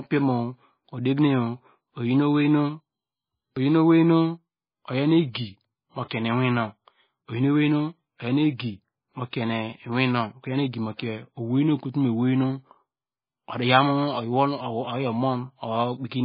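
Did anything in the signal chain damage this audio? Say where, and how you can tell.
Yes. Throughout the speech the sound is watery and swirly, with a metallic chirping flutter on s sounds and consonant attacks that blur instead of landing crisply. Nothing reaches above 5 kHz, so the top end ends abruptly at a hard ceiling. The damage sits at the codec stage and is likely heavy MP3 compression at a very low bitrate, around 17 kbps. Starved of bits, the encoder cut everything above that fixed frequency and zeroed quiet spectral lines, which then flicker on and off from frame to frame.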